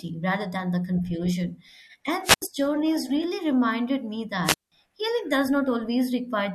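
Speech with two wireless microphone squelch dropouts, at 2.23–2.42 s before "journeys really reminded me" (a mute of about 81 ms) and at 4.44–4.72 s before "healing does" (about 179 ms). A fading radio signal lets hiss swell before the receiver's squelch cuts the output. That rising static is what separates it from a clean digital packet gap.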